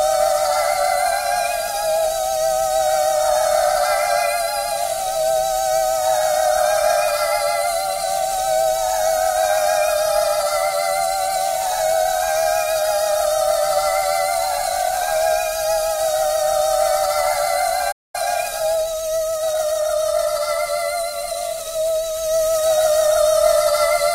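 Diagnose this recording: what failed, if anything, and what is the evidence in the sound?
The sound drops out at 17.91 s and comes back at 18.15 s, leaving a gap of roughly 0.22 s in the middle of the flow. That's a playback stall at the playback/buffer stage. The likely cause is that the player ran dry on data or had its output thread held up, so nothing was written to the output until it got going again. It's too long to be a click and too abrupt to be a fade.

Straight after that, from 18.15 to 20.33 s, the audio runs hurried at about 1.1x speed while keeping its normal pitch. That's time-compressed catch-up, still in the playback stage. Having fallen behind during the gap, the player works off its backlog by cutting out short pieces and cross-fading across the joins. That shortens the material without resampling, so the timing tightens but the pitch stays put until it's caught up.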